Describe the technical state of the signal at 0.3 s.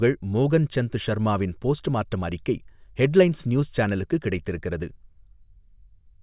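At 0.3 s the speech signal is intact, with no audible dropout, distortion, glitch or other technical fault at that moment.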